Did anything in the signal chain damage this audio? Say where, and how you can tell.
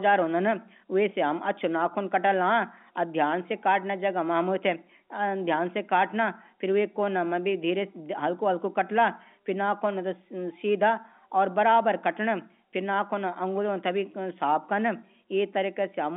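No, nothing in the signal chain damaged this audio.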